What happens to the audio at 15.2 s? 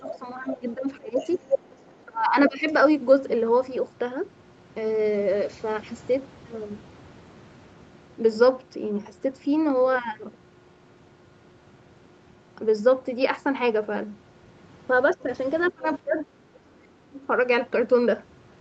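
Speech suppressed in double talk, 15.15 to 15.27 s: the speech briefly dips by about 15 dB, likely because an echo canceller could not tell the near-end talker from overlapping far-end echo and ducked both.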